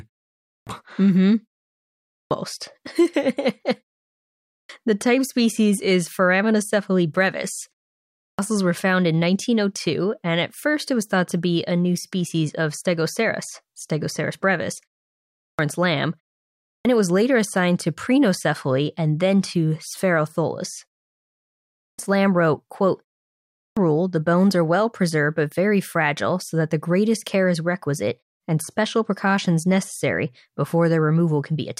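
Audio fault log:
0.40, 2.02, 4.42, 8.12, 15.32, 16.58, 21.67 and 23.48 s: clipped start after a pause. After each silence of 0.39 to 0.87 s, the output device has dropped into sleep and needs time to wake, so the first 266 to 316 ms of the returning speech never plays and each phrase begins abruptly, missing its opening sounds. A muted pause only empties the gap and loses nothing; here the speech itself is cut.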